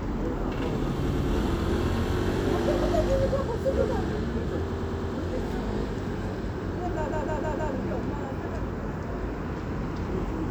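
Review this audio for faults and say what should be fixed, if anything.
Repeated frames: short runs of compressed frames were written or sent more than once, so the decoder replays the same stretch as a stutter. A 104.5 ms block plays twice more at 1.09 s and four more times at 4.72 s. A 156.7 ms block plays four more times at 7.10 s. These repeats add 0.21, 0.42 and 0.63 s of extra audio.

Drop duplicate frames by checking sequence numbers or timestamps before decoding.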